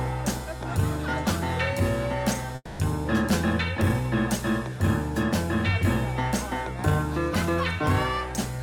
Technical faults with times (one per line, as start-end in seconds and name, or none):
2.55-2.81 long network dropout